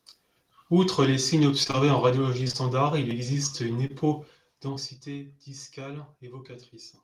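Short concealed packet loss occurs in three runs of roughly 20 ms gaps: 1.63–1.75 s around "les signes", 2.43–2.55 s just before "il existe une", and 3.87 s after it. The decoder bridged each gap by extending the preceding sound, which is heard as brief smears or wobbles.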